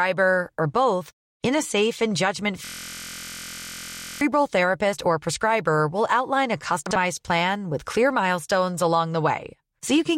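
From 2.65 to 4.21 s, after "a safe and judgment", a system hang loop repeats one 23.2 ms slice (likely a 1024-sample buffer) as a steady 43 Hz buzz. The waveform shows identical repeating blocks, and the spectrogram shows evenly spaced 43 Hz harmonic lines until "therapist or prescriber will".

From 6.86 to 6.96 s, frames out of order swap two 46.4 ms halves, giving a garbled flutter. The spectrogram shows abrupt vertical seams at the joins.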